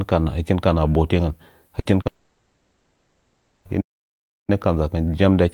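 Around 1.79 to 1.87 s there's a burst of packet loss. Roughly 60 ms of audio never got played, and the receiver papered over it by stretching the last sound and fading it. You hear a short held buzz or hiss, then the speech jumps ahead with that bit gone.

Right after, from 2.01 to 2.07 s, comes a short concealed packet loss. About 40 ms didn't reach the decoder in time, so it was filled by extrapolating the preceding sound and blending back in. It comes across as a quick smear or wobble rather than a clean gap.

From 2.07 s straight through to 3.67 s the speech gives way to a long network dropout. For about 1.6 s the signal is just a synthetic continuation of the last sound, a fading buzz or hiss with no real speech underneath, and it never drops to full silence. This is likely a stretch where the network stopped delivering packets altogether, and when speech returns, that whole chunk is simply missing.

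Then at 3.80 s the sound stops dead mid-flow and stays silent until 4.50 s, about 0.68 s, before carrying on. That's a playback stall, likely the output starving for data or its playback thread getting blocked.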